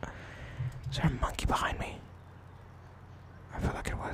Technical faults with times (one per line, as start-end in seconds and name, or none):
1.96-2.76 filter restarted on every block